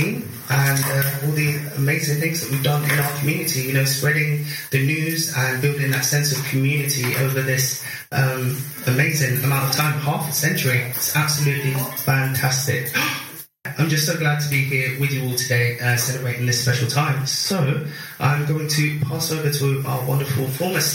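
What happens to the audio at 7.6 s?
Nothing goes wrong at 7.6 s; the audio plays through that moment without any dropout, glitch or other fault.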